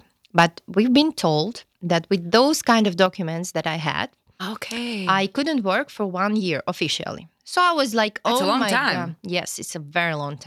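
Speech in which two loud moments take on a crackling, squared-off edge: at 0.38 to 0.44 s, and at 2.34 to 2.36 s between "told that with" and "kind of". This is likely microphone overload, with input gain set so high that the tops of the waveform were cut off. They exceed the converter's limit by about 5 dB and about 2 dB respectively, with a few percent and under two percent of samples flattened. At 3.06 s, between "kind of" and "that I", voice and background drop together by about 4 dB in one abrupt step, which likely reflects the microphone volume being stepped down by the call software in response to that clipping.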